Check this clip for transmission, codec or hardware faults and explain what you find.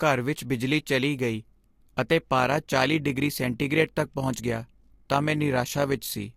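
One fault is present, an overlap-add ripple, from 2.38 s to the end, starting just after "ਬਿਜਲੀ ਚਲੀ ਗਈ ਅਤੇ". The speech was split into windowed frames and rejoined with overlaps that don't sum to constant gain, so the level swings by about 6 dB once per frame, around 50 times a second, which is heard as a rough, rapid modulation.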